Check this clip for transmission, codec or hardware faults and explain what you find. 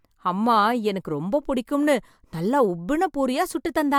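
No transmission, codec or hardware fault can be heard anywhere in the speech, with the signal staying continuous and intact throughout.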